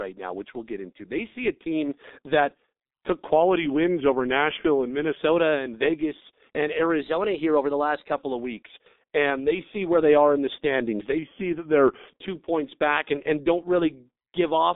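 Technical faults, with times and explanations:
Throughout, G.723.1 codec: the speech is muffled and hoarse, with nothing above 3.8 kHz. The low 6.3 kbit/s coding of 30 ms frames smears the consonants heavily.
3.33 to 5.17 s, after "a team that took", drift correction step: playback slows about 6%, pitch drops about a semitone, then it snaps back. That's likely clock-matching software refilling its buffer.
7.01 to 8.12 s, ending just before "of weeks", drift correction step: the speed goes up about 6% and the pitch rises roughly a semitone before it returns to normal.
11.18 to 12.08 s, between "are in the standings" and "two points back and", drift correction step: the speech slows again by about 6% and sags about a semitone, then it recovers.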